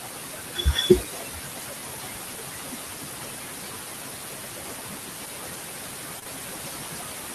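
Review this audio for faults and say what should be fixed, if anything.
Noise suppressor artifacts run throughout. The suppressor pulls the steady background down by about 19 dB in the gaps, so the room noise, only about 6 dB under the speech, pumps in and out around it. A gentler suppression depth would prevent this.

Speech cut by the noise suppressor, 0.24 to 1.04 s: the suppressor mistook quieter parts of the speech for noise and turned them down, by up to about 21 dB, across roughly half a second, so the opening sounds faint and swallowed. Slower, less aggressive gain tracking would prevent it.

Short concealed packet loss, 6.19 to 6.24 s and 6.24 to 6.28 s: two back-to-back gaps of about 20 ms each, which fits single 20 ms packets, were bridged by extending the preceding sound, leaving a brief smear. A deeper jitter buffer would prevent it.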